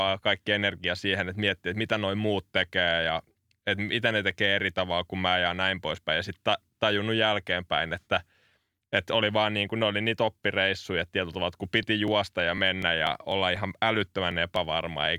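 Periodic USB or driver dropouts run from 11.58 to 15.06 s, every 0.248 s. Something blocks the audio path at that fixed interval, and about two milliseconds of speech are skipped each time, around fifteen times. This leaves evenly spaced ticks that sound only while speech is present.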